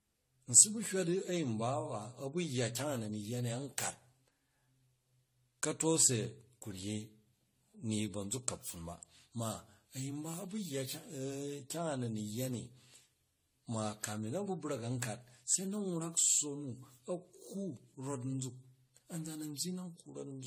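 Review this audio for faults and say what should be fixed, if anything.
The speech has a swirly, hollow smear from start to finish, with consonant attacks blurred, which points to generation loss, likely AAC-LC at around 64 kbit/s re-encoded about ten times, each pass requantising on a shifted frame grid so the damage stacks. Keep a lossless master and encode to lossy only once, at the final step.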